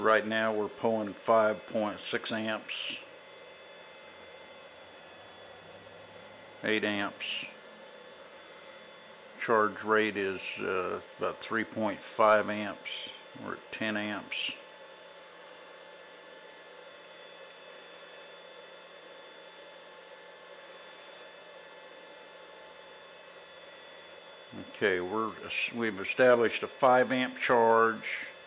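No technical faults are audible.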